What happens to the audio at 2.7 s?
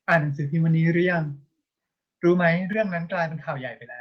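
The speech drops abruptly in level, by about 6 dB, at 2.73 s, most likely a microphone volume step-down, where the call software cut the input gain in one move.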